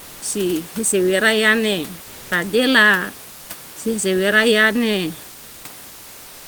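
A sender that stops transmitting during pauses, likely Opus discontinuous transmission, leaves the receiver to fill three gaps with comfort noise in place of the background: 2.03–2.31 s, between "si hisewera yane" and "taela si sewera yane"; 3.29–3.49 s, before "si sewera yane"; and 5.87 s to the end. Each time the textured room noise, about 25 dB below the loudest parts, turns into a flat, featureless hiss, shifting level by about 1 dB.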